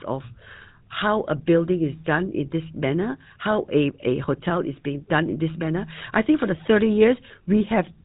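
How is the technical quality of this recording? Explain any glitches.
The recording is clearly degraded by one fault that runs through the whole clip.

GSM full-rate codec, throughout: the speech has been squeezed through the original GSM mobile-phone coder, which models the vocal tract and excites it with a sparse train of regularly spaced pulses instead of the real signal. The band stops at about 3.8 kHz, and the plainly audible coding damage, consistent with a 13 kbit/s coder, gives the speech a buzzy, gravelly roughness and a muffled, telephone-like top end.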